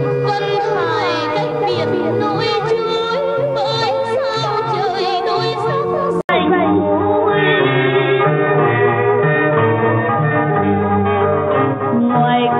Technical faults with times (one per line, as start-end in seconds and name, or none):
6.21-12.59 input switched to a poorer device